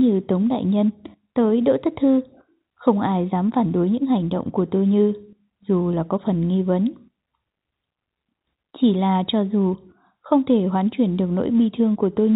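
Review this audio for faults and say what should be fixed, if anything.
Nothing needs fixing: the speech carries the expected narrow telephone band and faint level-following quantisation noise of G.711 mu-law coding at 64 kbps, which is the format working as designed.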